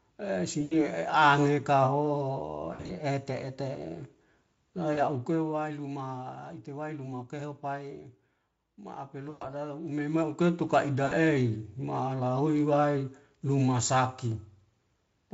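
Brief buzzy, smeared patches break into the speech at 0.61 to 0.76 s, 2.73 to 2.92 s, 4.93 to 5.01 s, 9.29 to 9.45 s and 11.05 to 11.13 s, each fading and leaving the sound thin just after. This is VoIP packet loss concealed by the speech codec. About 100, 120, 40, 120 and 60 ms of audio went missing, the second gap scattered across 160 ms, and the decoder stretched its last pitch and spectral shape while lowering the gain.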